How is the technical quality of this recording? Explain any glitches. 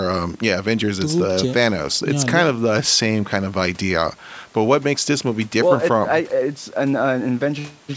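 No glitches can be heard in this speech recording, which has passed through the microphone processing of a call, so the lowest bass is trimmed away and nothing reaches above 8 kHz, as expected for that path.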